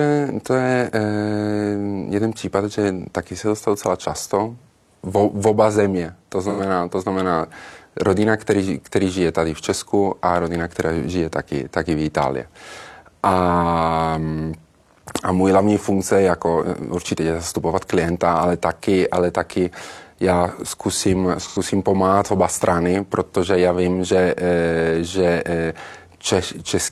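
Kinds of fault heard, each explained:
AAC frame loss with concealment: twice in this speech the stream lost audio, about 85 ms each time, which fits two AAC frames, and the decoder covered the gap by reusing the last good spectrum. From 6.44 to 6.60 s, just before "to znamená rodina který", and from 21.41 to 21.58 s, between "ale taky já zkusím" and "pomáhat oba strany protože", the sound turns briefly smeared and phasey. A spectrogram shows blurred, static-looking bands with no fine harmonic detail; the waveform shows an envelope that is too even.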